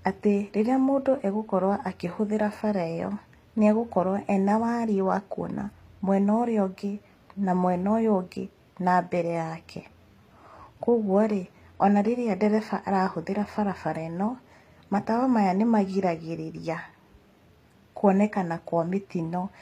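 Throughout, the speech has bright but gritty, lispy s sounds and nothing above 14.9 kHz, likely HE-AAC compression near 24 kbps: rebuilt treble, unlike a plain low-pass's dullness.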